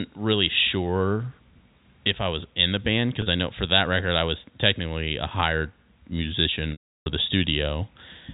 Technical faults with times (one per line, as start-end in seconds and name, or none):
3.22-3.26 packet loss with pitch repetition
6.72-7.06 packet loss with pitch repetition